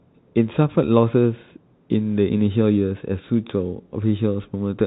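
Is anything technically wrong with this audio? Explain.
No, nothing is technically wrong.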